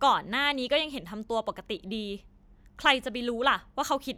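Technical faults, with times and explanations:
2.85 s, DC step: the waveform's zero line jumps abruptly by about -36 dBFS, then drains away as a high-pass filter near 20 Hz pulls it back to centre, so the speech carries on unchanged over one brief low thump.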